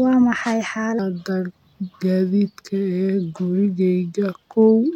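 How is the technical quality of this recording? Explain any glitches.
The recording has a speed problem. From 0.99 s to the end, a section at the wrong speed runs at 0.83 times its proper rate. That stretches everything out and drops the pitch together, by around three semitones, so the speech suddenly sounds deeper, heavier and noticeably slower. The switch is abrupt, not a gradual drift. The likely cause is that stretch being played back against the wrong clock, where an editor or player assumed a rate about 17 percent too low for the material.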